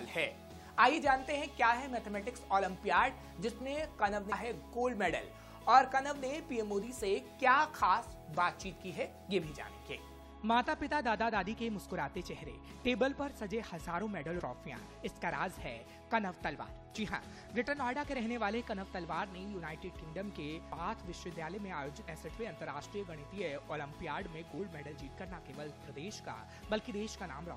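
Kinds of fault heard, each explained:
Damaged data in a compressed stream: Some bytes of the encoded stream are corrupt. The decoder misreads those frames and loses sync until it finds a valid header. Here it causes four blips of about 20 ms, at 4.31 s, 14.39 to 14.41 s, 22.07 s and 24.58 s.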